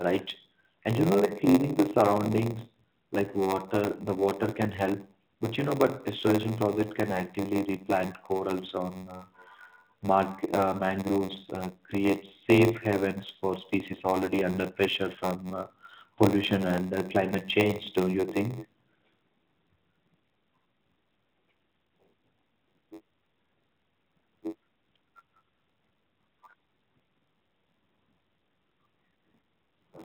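All the way through the speech there's a steady buzz at about 93.8 Hz, the signature of a block size mismatch (padded). One stage hands over blocks a little shorter than the next stage reads, which fits a 512-sample read block, and the shortfall in each is filled with silence. Those tiny gaps repeat at the block rate, which gives the buzz, and they stretch everything to 0.938 times normal speed while the pitch stays about where it should. Underneath, the narrowband mobile codec's band limit is audible, with nothing above 4 kHz.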